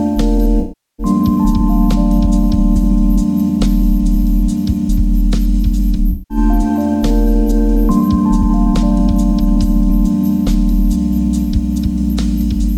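The audio carries a grainy, signal-following distortion throughout, with the noise roughly 40 dB below the signal. Quiet passages turn gritty. This is likely low bit depth without dither, consistent with 8-bit truncation. AAC frame loss with concealment appears twice, at 0.60 to 1.06 s and at 6.11 to 6.38 s. The sound smears, which fits about 384 ms and 192 ms of missing frames.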